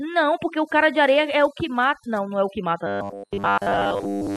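From the start, overdone noise removal leaves the background near silent, sprinkled with twinkling specks. Bands near the noise estimate are cut deep along with quiet speech detail; unlike a simple low-pass, the dulling flickers band by band rather than being fixed.

From 2.87 s to 4.36 s the speech turns into a rigid metallic buzz at 100 Hz. This is robotic sound from repeated short buffers, likely caused by audio arriving too seldom so that roughly 10 ms slices are looped. Most of the material there is repeated, not heard. Unlike a vocoder-style robot effect, the buzz pitch stays locked while the speech shape only loosely follows.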